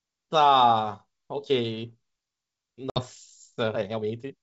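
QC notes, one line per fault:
1.31–4.42 s, time-stretched section: from 1.31 s to the end the speech runs about 1.67 times faster with its pitch unchanged, so the pace jumps abruptly and the audio turns rushed. This is likely stretching software discarding short slices to shorten the passage while preserving pitch.
2.90–3.00 s, packet loss on an ADPCM call: roughly 60 ms of audio on the G.722 stream drops to hard-edged silence, consistent with a few lost packets. The decoder's predictor and step size fall out of step with the sender's, so the speech resumes slightly distorted, settling within some tens of milliseconds.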